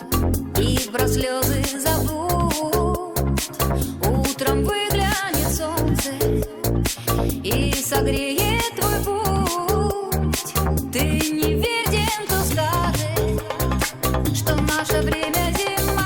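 No technical faults detected anywhere in the audio.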